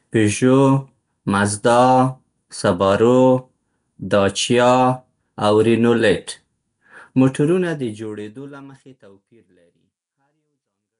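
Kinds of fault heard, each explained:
Nellymoser compression: a rough, hissy halo and smeared, underwater texture throughout, likely from that Flash codec; spectrograms show noise-filled bands and nothing above 10.6 kHz.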